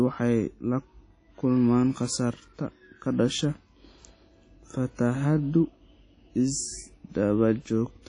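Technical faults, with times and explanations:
Throughout, WMA compression: the speech sounds washy and ringing, with a hiss that swells and fades along with the voice, and nothing is heard above about 10.1 kHz. This is likely a Windows Media Audio encode at a low rate, one that fits around 32 kbps. Its long transform blocks smear quantisation noise over tens of milliseconds around each sound, and the encoder discards weak detail and the top of the spectrum to save bits.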